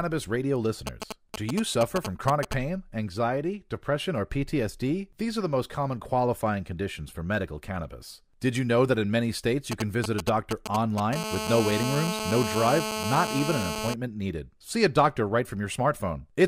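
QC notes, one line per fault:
0.87–2.54 s and 9.72–11.15 s: GSM signalling bursts, a galloping dit-dit-dit of brief 217 Hz buzzes, about 5 dB below the speech; spectrogram shows intermittent vertical comb stripes.
11.16–13.94 s: GSM phone buzz, a steady raspy 217 Hz buzz about 4 dB below the speech from a phone in a call; spectrogram shows continuous harmonic lines every 217 Hz.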